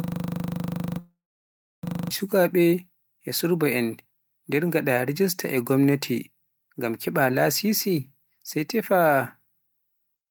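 A system hang loop is already under way when the clip begins and runs until 2.11 s. The machine or its driver has frozen while the sound hardware keeps replaying one 40 ms slice of its ring buffer, about fifty times, producing a rough, steady buzz at 25 Hz.

A long network dropout runs from 0.99 to 1.85 s. It sounds like a sound that fades out and is then followed by about 0.67 s of silence. The likely cause is that no audio arrived and the receiver padded the gap before falling quiet. When the sound returns, roughly 0.84 s of the original is missing.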